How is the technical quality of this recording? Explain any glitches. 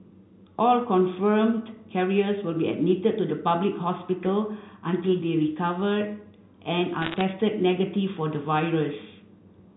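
A short burst of crackle breaks into the speech, on top of the narrow telephone band that fits G.711 telephone coding, with nothing above 4 kHz.

From 7.02 to 7.21 s, sharp ticks pepper the speech underneath. These are bit errors on a digital phone line. Around one bit in a hundred flipped, and each flip corrupts a single sample. When a high-order bit, or the sign of a loud sample, is hit, that sample jumps and clicks.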